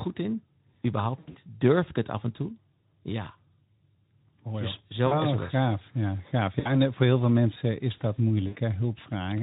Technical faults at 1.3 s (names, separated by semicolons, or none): VoIP packet loss concealed by the speech codec